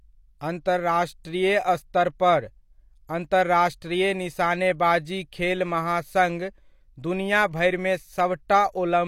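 At 1.24 s, and again from 3.07 to 3.09 s just before "अन्तर्राष्ट्रीय निशानेबाजी खेल महासङ्घ", pre-echo appears: the codec's quantisation noise, sized for a sharp attack late in its block, leaks into the quiet moment ahead of it. Each attack is preceded by a brief hiss, 10 ms and 20 ms long, and its onset sounds smeared.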